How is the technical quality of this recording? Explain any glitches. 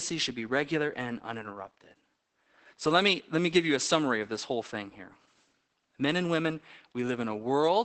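The recording is plainly degraded by Opus voice compression across the whole clip. Throughout, SILK's coarse excitation coding at a bitrate consistent with roughly 12 kbps makes the speech muffled, hoarse and slightly robotic.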